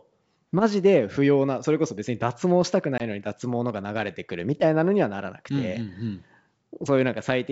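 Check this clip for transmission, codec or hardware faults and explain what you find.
There's one real fault, a short dropout just before 3 seconds, over G.722 wideband coding that sounds clean apart from its light upper-band hiss.

Packet loss on the ADPCM call, 2.98 to 3.02 s: about one packet's worth, 20 ms, drops to hard silence. The decoder's predictor and step size lose sync with the sender, so the speech comes back slightly off before settling within tens of milliseconds.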